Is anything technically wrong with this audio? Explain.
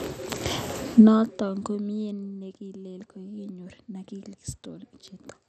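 Yes. MP2 compression artefacts run through the whole clip. The sound likely passed through an MPEG Layer II encoder at a low bitrate, around 64 kbps. That encoder divides the spectrum into 32 sub-bands and gives each only a few bits, so upper bands are dropped entirely and the rest are coarsely quantised. Nothing remains above 14.3 kHz, and the speech sounds dull, with a gurgling, granular roughness.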